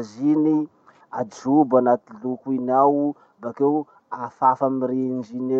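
No technical faults can be heard in this speech recording. Nothing at any point in it calls for comment.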